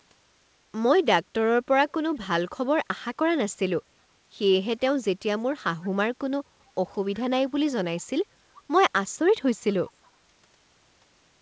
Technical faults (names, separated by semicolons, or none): echo leak